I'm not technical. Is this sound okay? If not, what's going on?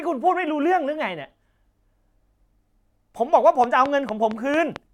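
No. From 3.64 to 4.77 s there is a train of clicks: about seven sharp ticks, evenly spaced at roughly four and a half per second, riding on top of the speech. They are all alike and keep a steady beat, which sets them apart from the random, uneven crackle of a dirty connection or a single pop from a bump. The likely cause is electrical interference from nearby equipment or a faulty power supply.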